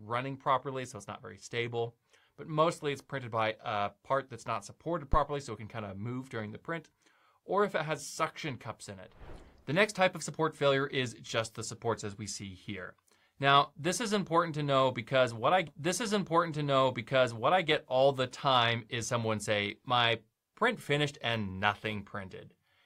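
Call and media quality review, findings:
Phantom power thump, 5.13–5.20 s: deep low-frequency thump, decaying in about 15 ms. Probable component: mic preamp input. Supply switched on a live channel; the voltage step passes through the coupling capacitors into the signal path as a single transient.

Stream segment repeated, 15.67–17.67 s: 2 s of audio plays again, with a small blip at the jump back. Probable component: media player buffering or segment queue. The same segment was fetched or queued twice, adding 2 s to playback.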